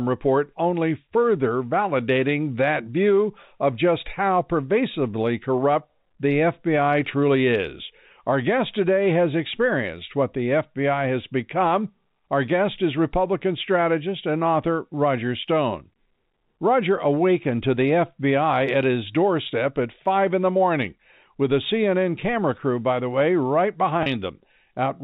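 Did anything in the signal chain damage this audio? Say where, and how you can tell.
Yes, network packet loss with pitch repetition at 24.03–24.06 s: 30 ms concealed, fitting one lost packet, with identical repeated waveform cycles and frozen spectrogram harmonics.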